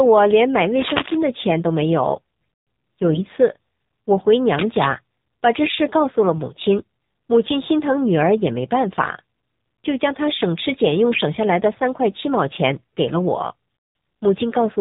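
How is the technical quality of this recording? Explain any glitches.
The recording has limited technical quality. It runs entirely through a narrowband mobile codec, with two scratchy noise bursts and three short spells of corrupted decoding.

AMR narrowband mobile codec: Throughout, nothing above 4 kHz survives, and the speech sounds plainly buzzy and synthetic. The codec rebuilds each 20 ms frame from a vocal-tract model and a few excitation pulses. The degree of damage points to a low AMR-NB mode around 7.4 kbps.

Cable scratch noise: From 0.79 to 1.22 s and from 4.54 to 4.87 s, dense, uneven rustling bursts sit over the speech. The first is a little below the speech level and the second is about as loud. The likely cause is a worn cable or connector being moved, with its contact resistance fluctuating rapidly.

AMR bit errors: At 3.08–3.23 s, 5.62–5.77 s and 11.11–11.23 s, the speech turns hoarse, scratchy and gargly while roughly keeping its pitch and level. 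Each spell covers a handful of frames. Flipped bits in the less protected data misplace the excitation pulses and skew the fine spectral and gain values.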